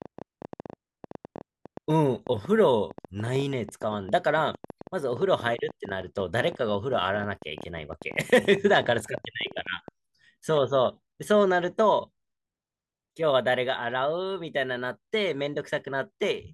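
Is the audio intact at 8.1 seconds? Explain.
No. A train of clicks runs from 0.02 to 9.89 s, so 8.1 s falls inside it. Something is injecting short, similar pulses into the signal, most likely interference from nearby equipment or a faulty connection or power supply. About a hundred clicks arrive at roughly 11.9 per second with uneven spacing, peaking somewhat above the speech level, and are heard as irregular ticking and popping over the speech and through its pauses.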